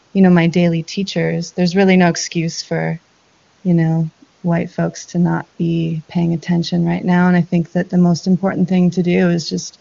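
No technical faults can be heard anywhere in this recording.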